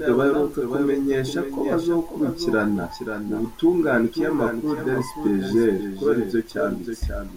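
Throughout the speech, a doubled audio track is audible: a second full-band copy trails the original by about half a second, roughly 10 dB quieter, with no decay or room colour. The likely cause is the signal being captured again through a slower path.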